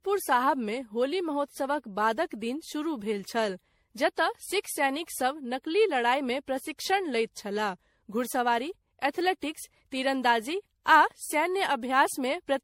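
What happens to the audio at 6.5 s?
At 6.5 s the speech sounds swirly, smeared and hollow, with blurred attacks and nothing above 16.5 kHz, as it does throughout. The likely cause is generation loss: around ten MP3 passes, consistent with 64 kbit/s, each requantising on a shifted frame grid so noise and spectral holes accumulate.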